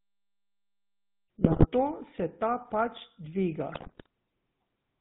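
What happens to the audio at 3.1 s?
At 3.1 s the speech is passing through the GSM full-rate codec, which affects the whole clip rather than one moment. The codec models the vocal tract and excites it with sparse regular pulses, discarding content above 4 kHz, so the speech sounds band-limited, buzzy and gravelly, at a rate consistent with 13 kbps.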